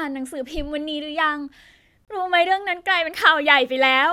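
Speech clip with a gap at a join of encoded pieces: a gap of about 27 ms from 2.05 to 2.08 s, with smeared edges, left by untrimmed encoder delay and padding.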